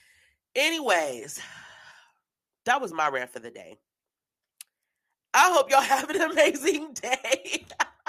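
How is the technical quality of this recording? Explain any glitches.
No technical faults are audible anywhere in the recording.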